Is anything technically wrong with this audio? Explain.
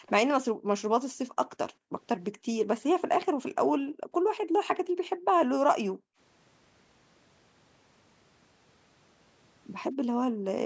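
Yes. There are two faults. Background gated by the echo canceller occurs at 0.00 to 0.06 s, 0.52 to 0.71 s, 1.73 to 1.92 s, 2.37 to 2.47 s, 3.78 to 5.35 s, 5.92 to 6.18 s and 9.95 to 10.46 s. While the far end was playing through the loudspeaker, the canceller clamped the microphone down by about 40 dB, and by about 31 dB at 2.37 s. The room tone dips or vanishes, longest for roughly a second within 3.78 to 5.35 s, then returns.

An echo leak follows at 0.06 to 0.10 s. The canceller likely failed to remove all of the loudspeaker sound the microphone picked up, so a faint copy delayed by 188 ms, around 30 dB below the speech, slips through as a brief scrap. The call's microphone processing is working normally, with nothing above 8 kHz.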